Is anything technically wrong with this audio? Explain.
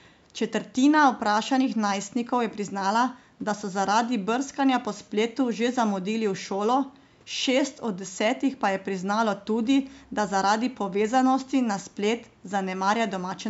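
No, nothing technically wrong stood out on listening to this speech recording.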